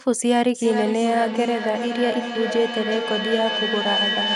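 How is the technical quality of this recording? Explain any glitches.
Technical quality is poor because of feedback howl. From 0.55 s to the end of the clip, sound from a loudspeaker loops back into the microphone, gaining level each pass. It narrows to a whine around 3 kHz, pulsing roughly every 0.4 s and peaking about 4 dB below the speech.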